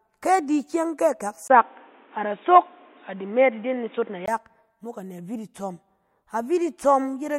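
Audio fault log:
1.48–4.28 s, input switched to a poorer device: the speech suddenly turns dull and boxy, with nothing above 3.8 kHz. There is a 20 ms gap at the changeover, the level shifts by around 5 dB, and a new background noise sits roughly 35 dB below the speech until the fuller sound returns at 4.28 s. The cause is likely the input jumping to a narrower-band microphone or headset call profile with its own tone, gain and noise floor.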